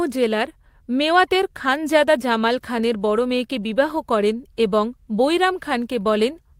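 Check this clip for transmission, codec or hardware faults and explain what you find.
Nothing stood out on listening to this speech recording; no transmission, codec or hardware trouble could be heard at any point.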